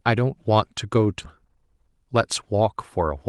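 A speech clip with two timing faults. At 1.23 to 1.25 s there is a skip ahead. Roughly 0.7 s of speech is missing, and the audio on either side is butted together with no silence or concealment filling the join. Unlike a dropout, nothing is heard in the hole: the sound simply lurches forward, which fits the jitter buffer discarding a queued stretch once later audio had piled up. From 1.40 to 3.12 s comes a jitter buffer speed-up. Playback runs at about 106% speed while the pitch stays put, because the buffer is trimming its backlog by cutting short pitch-period slices, around a tenth of a second in total. The unchanged pitch is what separates this from a sample-rate or resampling error, which would raise the pitch along with the tempo. Both faults sit on top of the Opus call path, whose coding at 32 kbps caps the top end near 12 kHz.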